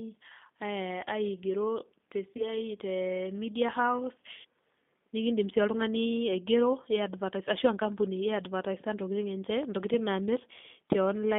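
From the start, the speech has that G.729 codec sound: 8 kbit/s, band squeezed to roughly 200 Hz–3.5 kHz, clearly rough and slightly synthetic throughout.

At 2.37 s there's VoIP packet loss concealed by the speech codec: about 20 ms goes missing, which fits two 10 ms frames. The decoder stretches the last sound out as it fades, and things stay weak until about 2.53 s.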